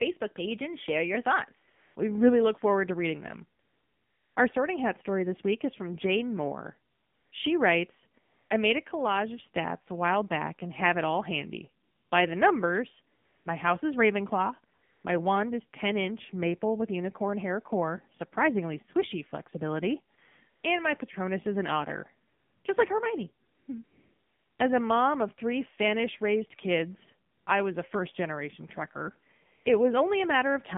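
The AMR narrowband mobile codec runs for the whole speech clip at 7.4 kbps, passing only about 150 Hz to 3.5 kHz. It models the voice with a vocal tract filter and a few pulses per frame, so the coding damage is plainly audible throughout.

AMR comfort noise appears in 14 pauses between 1.70 s and 29.66 s, lasting from 20 ms up to 760 ms. The longest are at 3.60 s and 23.84 s, and one falls between "is an otter" and "just like" at 22.28 s. In each pause the phone stopped sending speech frames, so the receiver filled the gap with steady synthetic noise that switches in and out.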